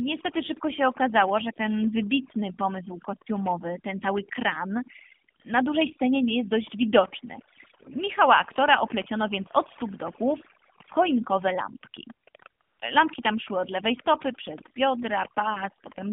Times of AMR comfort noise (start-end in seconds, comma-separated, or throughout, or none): 12.62-12.80